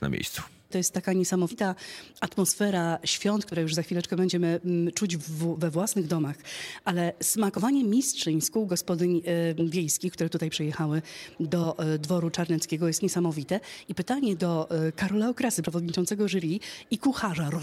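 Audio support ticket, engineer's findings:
No faults found on listening.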